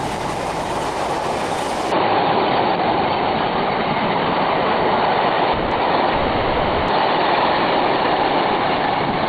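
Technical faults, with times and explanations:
1.92 s to the end: input switched to a poorer device. The sound turns dull with nothing above 4.5 kHz and about 5 dB level shift, with no gap, likely a microphone change rather than filtering.
5.53 to 5.73 s: call audio freeze. The last sound is drawn out as a fading buzz for 180 ms, likely from held-up packets, then resumes where it stopped, with nothing lost.
5.75 to 5.81 s: short stall from a late packet. One sound is held about 40 ms too long with a slight buzz, briefer and milder than a freeze, with nothing skipped.
6.13 to 6.90 s: call audio freeze. A longer 750 ms held, fading buzz that never falls silent, after which the sound picks up exactly where it paused, so the gap is inserted rather than lost audio.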